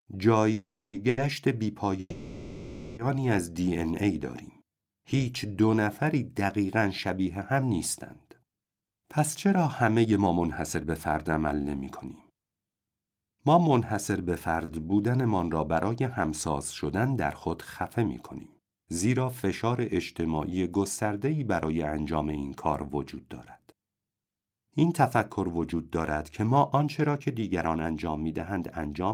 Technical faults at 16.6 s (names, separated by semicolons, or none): none